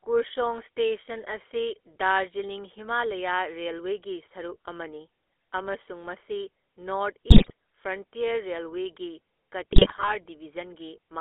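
Throughout the speech, the GSM full-rate codec rebuilds the voice from a vocal-tract model driven by a sparse, pulse-like excitation, which fits a 13 kbps stream. The reconstruction is coarse, so the voice has a plainly audible buzzy, gravelly roughness. The line band runs from about 300 Hz to 3.5 kHz, which leaves the sound thin and boxy, with no air above it.

From 7.3 to 7.52 s, and again from 9.72 to 10.16 s, GSM bit errors corrupt the decoder's filter, pitch and gain parameters. The damage points to a run of damaged frames in each stretch, with the second span lasting longer. The spectrum bends and the level jumps from frame to frame, so the speech breaks up into squawks, pops and gargling.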